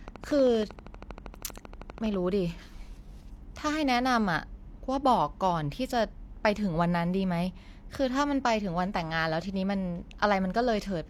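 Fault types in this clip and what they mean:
Train of clicks: a steady ticking of near-identical pops runs from 0.08 to 2.15 s, about 12.6 per second at regular spacing, roughly thirty in all and standing about 5 dB above the speech, audible through pauses too; likely interference from nearby equipment or a faulty connection or power supply.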